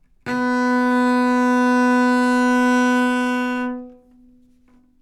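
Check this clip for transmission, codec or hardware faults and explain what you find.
No faults can be heard anywhere in this recording.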